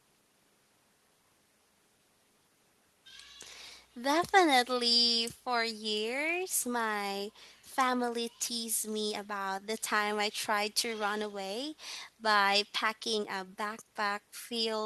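Nothing in this speech recording stood out as a technical problem on listening.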